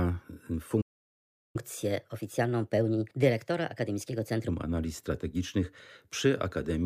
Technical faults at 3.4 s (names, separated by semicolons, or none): catch-up at higher speed